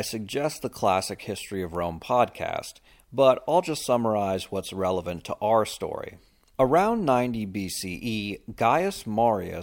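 No dropouts, clicks, distortion or other technical faults are audible anywhere in the recording.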